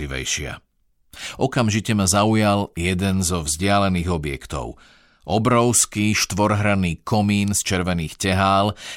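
Nothing stood out as a technical fault on listening through the speech.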